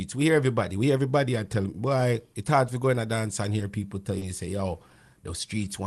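Speech over what sounds like an Opus call path, with the top end rolling off around 12 kHz. At about 4.18 to 4.24 s, just before "say yo", there's a short stall from a late packet: the jitter buffer ran dry, so the last bit of sound gets stretched, roughly 30 ms of it, held with a faint buzz or dip before things pick up where they left off. Nothing's actually lost, but everything after it lands about 30 ms later.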